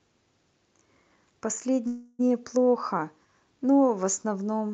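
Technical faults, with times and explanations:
1.87–2.29 s, call audio freeze: the speech stalls and the last sound smears into a fading buzzy hiss for about a third of a second. It then picks up exactly where it left off, so nothing is lost, but everything afterwards lands about 315 ms late. Most likely, packets got held up in transit and the jitter buffer ran dry, so the receiver filled the wait. The top end stays capped near 8 kHz, as the call codec delivers it.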